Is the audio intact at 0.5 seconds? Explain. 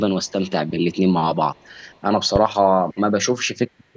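No. From 0.23 to 0.51 s there is an echo leak, likely because a loudspeaker side's echo canceller let some of its microphone pickup slip back. That leaves a very faint copy of the speech trailing about 0.35 s behind.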